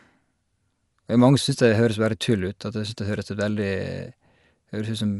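Speech, compressed throughout in a way that sounds like Dolby Digital compression at a low rate. The band stops at 11.4 kHz, so the sound is dull and lacks air, and the codec damage is plainly audible. Rough, fluttering noise sits around the tonal parts, likely from the encoder giving many frequency lines no mantissa bits and the decoder filling them with dither noise. This fits a bitrate near 64 kbps.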